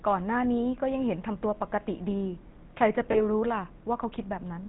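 Speech that has passed through a GSM full-rate codec: the vocal tract is modelled and excited by sparse regular pulses, leaving a plainly audible buzzy, gravelly roughness and nothing above 4 kHz, consistent with 13 kbps coding. From 3.12 to 3.25 s, lost GSM frames were concealed by repeating the last good frame, so the sound hangs briefly as a rough, metallic ring.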